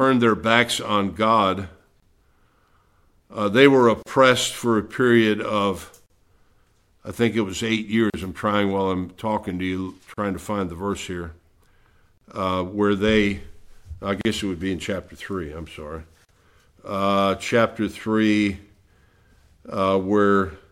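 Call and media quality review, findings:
Gap at a join of encoded pieces: brief dropouts at 2.00, 4.03, 6.06, 8.10, 10.14, 12.18, 14.21, 16.25 s, roughly every 2.0 s. First gap 26 ms, the rest 38 ms. Probable component: segment concatenation. Untrimmed encoder delay and last-frame padding are kept at each join. Waveform shows flat notches with smeared edges. Spectrogram shows thin vertical blank stripes across all bands.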